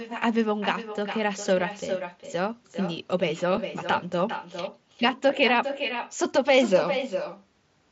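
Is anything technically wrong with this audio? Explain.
Yes, there are two faults. Throughout the clip there is echo with no canceller: the far end's loudspeaker feeds its microphone, so the speech returns about 9 dB quieter and thinner, roughly 0.4 s late. At 3.57 s, concealed Bluetooth headset packet loss replaces a 7.5 ms gap, which fits one lost frame, with a repeated stretch of recent waveform; it is almost inaudible. The mSBC headset link adds its light grain.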